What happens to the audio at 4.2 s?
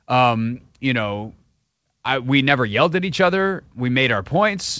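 At 4.2 s the speech comes through intact, with no dropout, glitch or distortion, and only the normal band limit of the G.722 call path, with nothing above 8 kHz.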